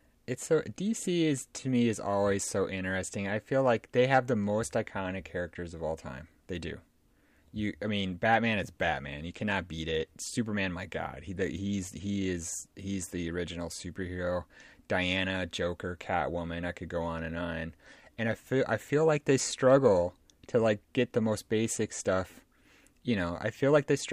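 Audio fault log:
7.92–24.12 s, periodic clock jitter: The converter clock wobbles at around 100 Hz. Each frequency in the speech gains sidebands about 100 Hz above and below it, stronger on higher frequencies. This gives a rough, metallic edge that disappears in pauses.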